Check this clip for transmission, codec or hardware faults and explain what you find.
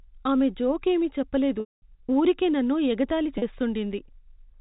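Two dropouts from packet loss with pitch repetition. From 1.6 to 1.82 s, between "ఆమె జోక్ ఏమీ చెప్ప" and "ఊరికే నన్ను ఎగతాళి", about 220 ms of audio never arrived, which fits a run of 20 ms packets. The receiver looped the last pitch period to fill the gap, so the sound becomes a held, buzzy tone that fades to silence before a short cross-fade back in. At 3.38 s, after "ఊరికే నన్ను ఎగతాళి", a 40 ms loss leaves only a brief buzzy hold. Both gaps sit inside G.711 telephone coding, which cuts everything above 4 kHz.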